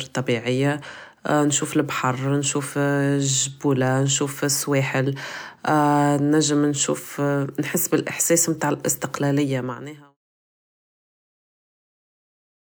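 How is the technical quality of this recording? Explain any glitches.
Nothing in this speech recording stood out as a glitch on listening, and the smooth fade-out that begins around 9 s and finishes at 10.17 s is a deliberate editing touch rather than a problem.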